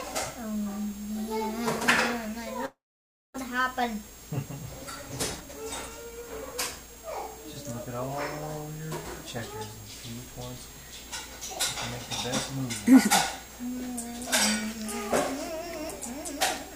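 From 2.65 to 3.36 s the sound gives way to a fading buzz and then about 0.58 s of silence, returning with roughly 0.4 s missing: a long network dropout, likely. A spectrogram shows smeared, decaying bands ending in a blank gap.

From 5.37 to 8.01 s a jitter buffer speed-up plays the audio about 9% faster at unchanged pitch, trimming roughly a third of a second to cut delay. The waveform appears compressed in time, while spectrogram harmonics stay level.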